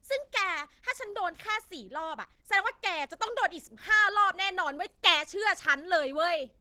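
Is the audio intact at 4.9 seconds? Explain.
No. At 4.9 seconds the speech carries Opus compression damage, as it does throughout the clip. The sound is plainly degraded: muffled, hoarse and rough, with a grainy texture in place of clean detail. The likely cause is Opus running in its hybrid speech mode, which fits a low rate of about 16 kbps. With so few bits, the coder models the voice coarsely and fills the upper bands approximately, leaving that hoarse, grainy character.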